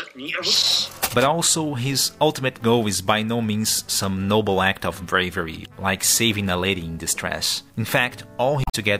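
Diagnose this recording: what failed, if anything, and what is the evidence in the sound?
The failure is in the codec stage, from damaged data in a compressed stream. It is heard from 8.64 to 8.75 s, near the very end of the audio. For about 0.11 s the sound breaks into a short, unnatural blip. Some of the encoded bytes in that stretch were corrupted or missing. The decoder could not read those frames properly. It lost sync and hunted for the next valid frame header before normal decoding resumed.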